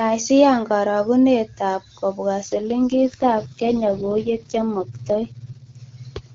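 At 2.43 s an AMR rate drop pushes the wideband codec into what sounds like its 6.6 kbit/s mode, leaving speech rough and raspy until 5.76 s.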